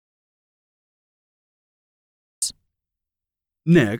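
From the very start until 2.42 s there's an audio dropout to silence: dead silence with no room tone at all, then the speech cuts in mid-flow. Most likely the input was lost, through a link or mute problem, while the recorder kept writing.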